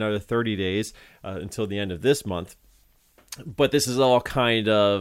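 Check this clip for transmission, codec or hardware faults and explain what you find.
Nothing stood out on listening to the speech here.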